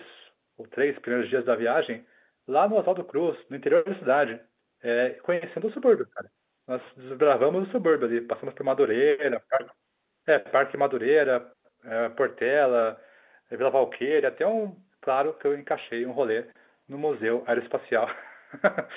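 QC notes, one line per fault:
No faults heard on this speech clip; the 8 kHz A-law G.711 telephone path caps the band below 4 kHz as expected.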